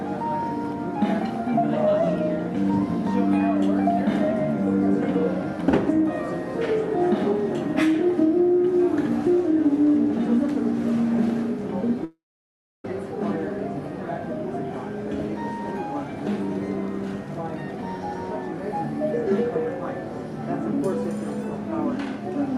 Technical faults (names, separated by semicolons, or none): long network dropout